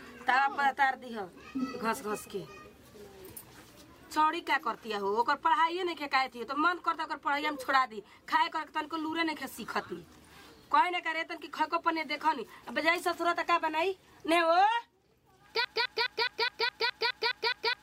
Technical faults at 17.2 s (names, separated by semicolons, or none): broken-record loop